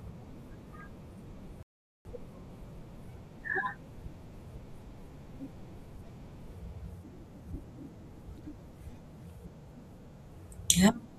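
At 1.63 s the player exhausted its downloaded audio and had to halt until more data arrived, a rebuffering stall. The speech drops abruptly into silence and stays there until 2.05 s, when it picks up at exactly the point where it broke off. No speech is skipped or repeated. Instead the gap inserts roughly 0.42 s of dead air, stretching the overall timing and leaving an unnatural pause mid-flow.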